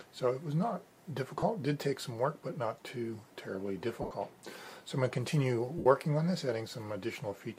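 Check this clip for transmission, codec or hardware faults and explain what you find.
There are three dropouts, all lost LE Audio frames. They occur at 1.39–1.43 s, 4.02–4.11 s (losses scattered over 90 ms, longest run about 70 ms) and 5.78–5.86 s. The LC3 decoder fills each gap by repeating the last spectrum with randomised signs, so tones smear into noise and then fade during the longer gaps.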